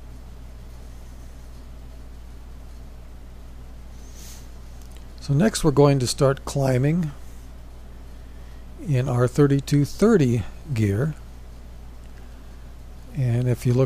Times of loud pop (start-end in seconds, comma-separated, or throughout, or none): none